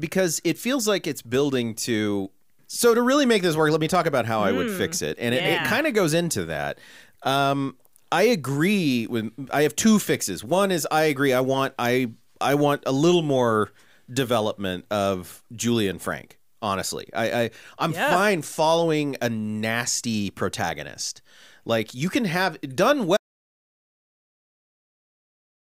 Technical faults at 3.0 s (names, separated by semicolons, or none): none